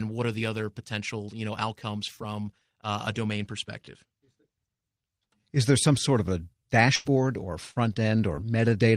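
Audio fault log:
6.95–7.07 s: burst of packet loss, right after "some sort of a". About 100 ms of audio never arrived in time to play. The receiver filled a gap of roughly 96 ms by extending the last received sound and fading it down, so the sound before the gap is held and then thins out. Playback then resumes about 100 ms further along, and the material in between is simply missing.
7.71–7.77 s, 7.93–7.98 s and 8.36–8.39 s: short concealed packet loss, three separate events. These drop about 40 ms, 20 ms and 20 ms of audio respectively. In each case the decoder bridged the gap by continuing the preceding sound, following its pitch where it was voiced or synthesising shaped noise where it was not. It then cross-faded back into the real signal. Because each patch is only a few hundredths of a second, it comes across as a brief smear or wobble.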